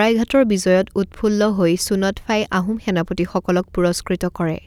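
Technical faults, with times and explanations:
No technical faults can be heard in this recording.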